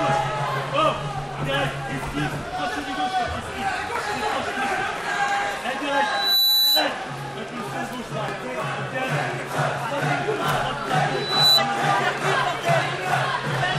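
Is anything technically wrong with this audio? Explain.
Yes. From 6.05 to 6.92 s, and again from 11.10 to 11.62 s, a piercing 4 kHz tone swells within a fraction of a second to sit above the audio. The second burst is louder. This is loudspeaker feedback squeal: the microphone picks up its own loudspeaker, and at 4 kHz the loop gain tops one.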